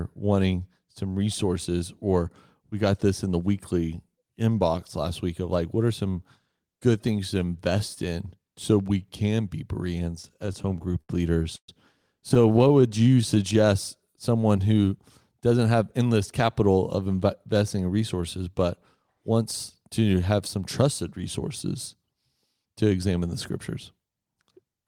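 A speech recording with three kinds of jitter-buffer fault. Repeated stalls (stutter) run from 10.22 to 11.69 s, after "so we can be": 14 gaps totalling 337 ms, the longest 122 ms, where packets arrived too late and the receiver extended the last sound until audio resumed. A second stutter from 12.29 to 12.84 s has 9 shorter gaps, none over 16 ms, filling 95 ms. In neither stretch is audio actually lost, but the sound drags and catches. A jitter buffer slow-down follows from 12.88 to 13.54 s, where the receiver repeated single pitch periods to rebuild its reserve, adding 79 ms and playing at 89% speed with pitch unchanged, so sounds are drawn out. From 15.50 to 17.07 s, between "someone who" and "investing in resources but", a jitter buffer speed-up cuts around 150 ms of pitch periods to shed excess delay, so playback runs at 108% speed at the same pitch and sounds hurried.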